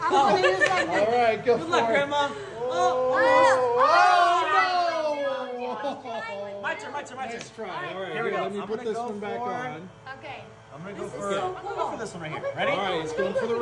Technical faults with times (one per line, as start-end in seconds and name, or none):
none